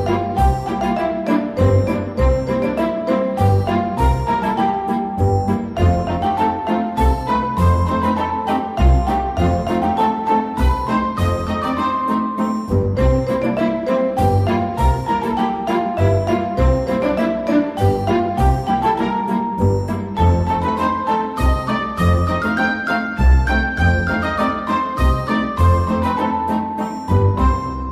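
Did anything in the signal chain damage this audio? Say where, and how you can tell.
No, nothing along the signal chain has left an audible mark on this recording. I can't point to any stage, from capture through to playback, where the sound gives away a problem.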